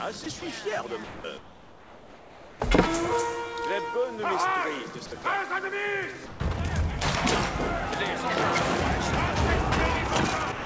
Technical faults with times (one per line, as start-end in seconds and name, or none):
0.24-0.42 sound dropped by the voice detector
1.04-1.24 sound dropped by the voice detector
1.38-2.60 comfort noise in place of the background
5.06-5.24 sound dropped by the voice detector
6.26-6.40 sound dropped by the voice detector
10.52-10.66 sound dropped by the voice detector